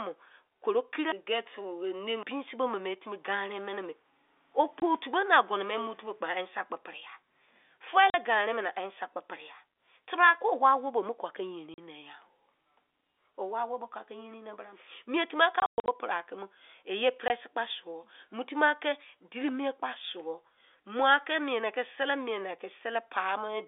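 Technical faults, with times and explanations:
4.8 s, 8.10–8.14 s, 11.74–11.78 s, 17.3 s: packet loss filled with silence. Short holes of 20 ms or 40 ms cut the speech. Each gap is a multiple of 20 ms, which fits one or two lost 20 ms packets. The receiver played silence, so the holes have hard edges.
15.60–15.88 s: packet loss filled with silence. About 200 ms of audio drops out in scattered holes across 280 ms, the longest lasting 120 ms. The speech stutters there, with hard edges at each hole, over the telephone-band sound of G.711 coding.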